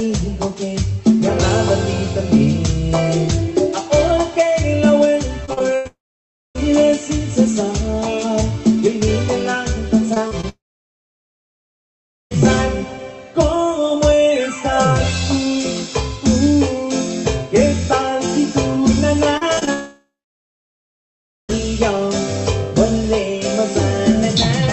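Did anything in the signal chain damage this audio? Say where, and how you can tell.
Yes, the damage is at the network stage.

Repeated packet loss (robotic sound) hits from 5.45 to 6.60 s. Five packets failed to arrive in time, the longest hole 93 ms, about 180 ms lost in total. The receiver patched each hole by stretching the preceding sound, so roughly 15% of that stretch is synthetic fill. You hear it as a choppy stutter with fragments missing rather than one clean break.

A long network dropout is the likely cause of three extended gaps, at 5.87 to 6.57 s, 10.49 to 12.33 s and 19.73 to 21.51 s. In each, the last sound carries on briefly as a fading buzz, then decays to silence or a faint steady floor lasting about 0.59 s, 1.73 s and 1.40 s respectively. Playback then resumes further along, with 0.68 s, 1.82 s and 1.76 s of audio simply gone.

Scattered short gaps surround the later two dropouts, from 10.14 to 12.36 s and from 19.38 to 21.53 s. 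Here individual packets went missing one at a time, around four in the first span and around five in the second, each only a few tens of milliseconds, totalling 80 ms and 120 ms. Concealment covers each hole by extending the prior sound, leaving brief ticks, smears and hiccups on either side of the longer silences.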